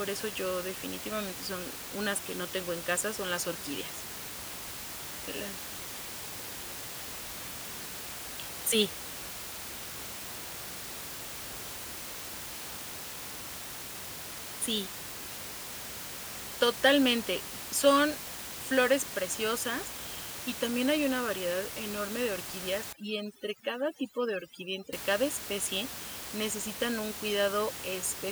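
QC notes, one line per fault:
22.93–24.93 s, overdone noise removal: an over-aggressive noise reducer cuts bands near its noise estimate, turning the room noise into twinkling near-silence and taking quiet parts of the speech with them.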